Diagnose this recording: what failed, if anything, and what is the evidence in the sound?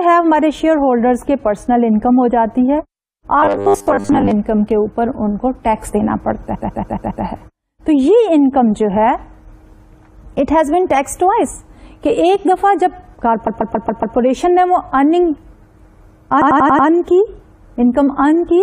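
Robotic sound from repeated short buffers, 3.39 to 4.31 s: the sound turns into a rigid, metallic 100 Hz buzz, with roughly 70 percent of that stretch repeated material. This likely points to a starved driver or buffer stage looping its last 10 ms of audio while fresh input was skipped.

Repeated frames at 6.54 to 7.23 s, 13.46 to 14.15 s and 16.41 to 16.87 s: each is a stutter where one block of audio (139.3 ms in the first two, 92.9 ms in the last) plays five extra times, adding 0.70 s, 0.70 s and 0.46 s. This is a codec or storage fault, with a run of compressed frames written or sent more than once.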